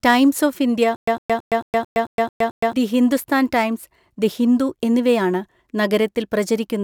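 From 0.96 to 2.73 s the speech breaks into a stutter with silent gaps. A 107 ms burst repeats eight times, each followed by 114 ms of dead silence, every 221 ms. A stalled stream likely replayed its last fragment at each retry, losing the speech in between.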